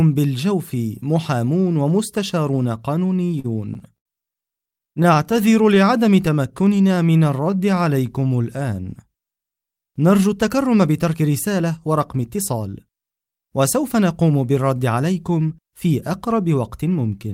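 From 3.17 to 4.07 s there's a run of repeated stalls, a stutter. Packets were showing up late, so the jitter buffer kept running dry and the receiver stretched the last bit of sound to cover the holes. Five gaps there, 150 ms filled in total, the longest 74 ms, so roughly a sixth of that stretch is patched. Nothing's actually lost, but it drags and hiccups.

It happens again from 4.71 to 5.78 s, this time as eleven quick catches, none longer than 19 ms, about 102 ms filled. That's more of a fine flutter than the heavier lurches before.

Overlapping that, from 5.31 to 8.58 s, you get a jitter buffer slow-down. The buffer was low, so the receiver built up a cushion by repeating single pitch periods and slivers of pauses over and over. Playback drops to about 91% speed, adding 295 ms, while the pitch stays put. It sounds stretched and sluggish, with drawn-out bits.

Then from 10.26 to 14.31 s it swings the other way with a jitter buffer speed-up. 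Too much audio had piled up, so the receiver trimmed tiny pitch-period slices to cut the delay, shaving off something like 0.4 s. It runs at about 108%, same pitch, and comes across noticeably hurried.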